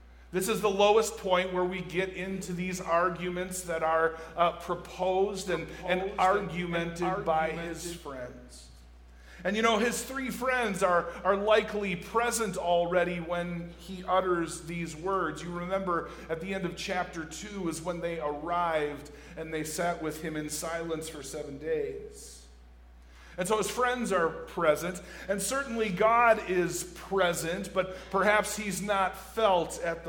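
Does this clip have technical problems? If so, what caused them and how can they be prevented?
Yes. From 5.47 to 7.97 s a doubled audio track appears: a clean, undecayed copy about 10 dB quieter trails roughly 0.7 s behind, cutting in and out abruptly, likely from a second, slower capture path mixed in. Prevent it by routing only one input into the mix.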